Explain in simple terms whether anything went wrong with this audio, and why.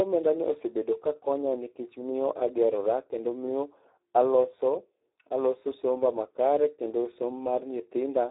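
Something did go wrong, across the whole recording. The speech has been squeezed through the Speex codec, an old internet-call format, at a very low setting. It sounds hoarse, noisy and somewhat robotic. It also sounds thin, like a phone line, because nothing above 3.8 kHz survives.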